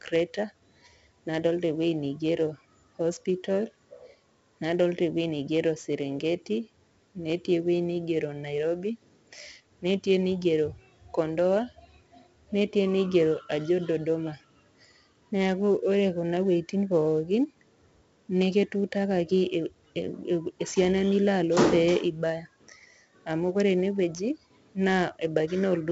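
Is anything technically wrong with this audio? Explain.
Yes, the whole clip has 4-bit ADPCM compression. Each sample is coded as a small step off a prediction, so there's gritty hiss riding on louder speech and roughness on sharp attacks. Nothing sits above 7.7 kHz, which fits a 16 kHz sample rate at 64 kbps, so it sounds dull too.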